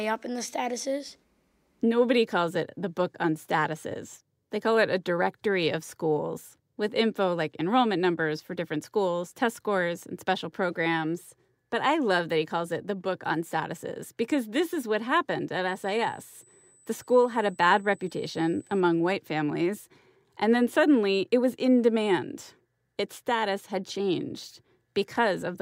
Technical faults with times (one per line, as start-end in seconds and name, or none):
15.68-18.81 USB whine